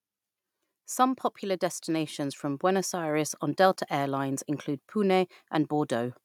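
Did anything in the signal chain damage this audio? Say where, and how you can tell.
Yes. From 1.40 to 3.45 s the speech and the background noise swell together, rising by about 5 dB. That joint lift is automatic gain rising in the call processing: the gain control judged the input too quiet and slowly increased its gain.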